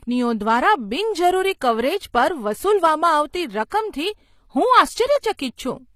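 HE-AAC compression, throughout: the treble above the coded band is likely rebuilt from copied lower bands, so sibilants sound gritty and lispy, nothing above 14.9 kHz, fitting roughly 24 kbps. Pre-echo, 3.69 to 3.72 s: block-spread quantisation noise fills 31 ms before a sharp attack, heard as a brief hiss that softens its onset.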